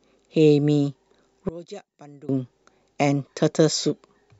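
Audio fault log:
1.49–2.29 s, one channel inverted: speech falls about 24 dB, likely from reversed polarity cancelling the shared centre content in the mono sum.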